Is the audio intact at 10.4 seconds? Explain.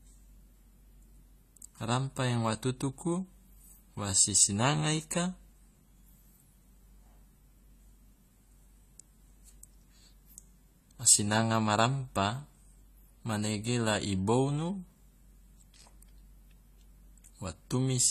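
No. The damage at 10.4 s runs through the whole clip. It sounds like AAC compression, likely at a low bitrate near 32 kbps. Nothing remains above 14.1 kHz. Coarse quantisation leaves spectral holes or noise-filled bands. The speech sounds plainly dull, smeared and fizzy.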